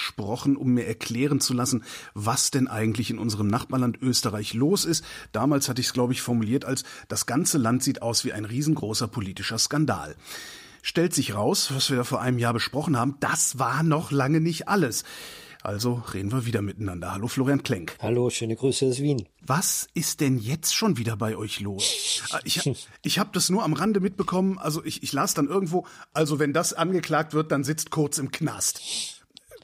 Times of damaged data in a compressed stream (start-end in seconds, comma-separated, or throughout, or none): none